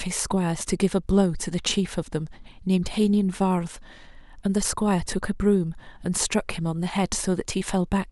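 Listening through this speech recording, nothing stood out as a technical fault at any point.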